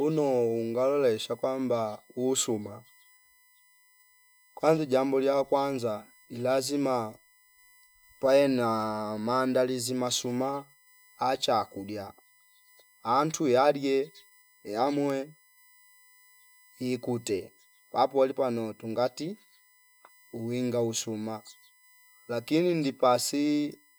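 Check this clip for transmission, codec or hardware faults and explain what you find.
There's one fault here, USB whine, running through the whole speech clip. It's a fixed-pitch tone at 1 kHz with its strongest harmonic at 2 kHz, sitting roughly 35 dB under the speech. It comes from the USB bus drawing current in 1 ms frames, and that ripple leaks into the audio through the power or ground.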